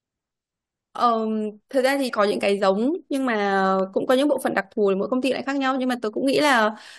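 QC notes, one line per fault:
2.08–2.10 s, stream segment skipped: the speech jumps forward abruptly with a brief blip at the join, so a stretch of the talk is simply absent and the sentence resumes partway through. This is likely a segment of the stream that failed to load, with the player moving straight on to the next one. The missing audio is not replaced by silence. The two sides are butted together, which is why the break sounds like a sudden leap rather than a gap.
3.79–4.65 s, CD scratch ticks: seven short, evenly spaced ticks, about eight per second, sit over the speech. The longest is only around a millisecond and a half, so each one is a sharp click rather than an audible hole. A blemish on the disc spoils more data than error correction can rebuild, once per revolution. The player then patches or mutes those samples, and that repeats with the rotation to form the steady rhythm.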